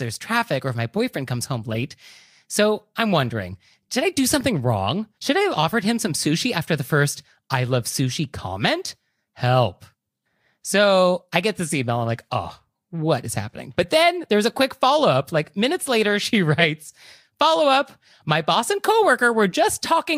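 At 1.72 to 1.76 s, right after "my boyfriend comes home", a corrupt frame decoded produces a short burst of misplaced energy. The same fault recurs at 4.41 s after "wondering did I do", and again at 16.60 to 16.65 s, louder, peaking near -10 dBFS against about -20 dBFS earlier. Each time, flipped bits in roughly two compressed frames were decoded anyway, so wrong gains and codes yield a brief chirp or noise blip.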